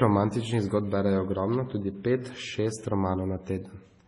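Throughout the speech there is transcoding between lossy codecs, likely MP3 at 32 kbit/s followed by AAC-LC at 32 kbit/s. Nothing remains above 11.2 kHz. The second encoder spends bits on the first one's artefacts. Both sets of artefacts are heard together.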